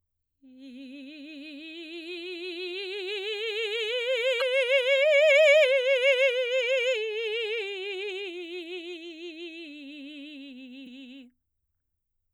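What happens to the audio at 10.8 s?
At 10.83 to 10.87 s the music is hit by damaged data in a compressed stream. For about 40 ms the decoder receives corrupted frame bytes, misreads them and loses sync until it finds the next valid frame header, producing a brief chirp, squawk, click or short hole in the music.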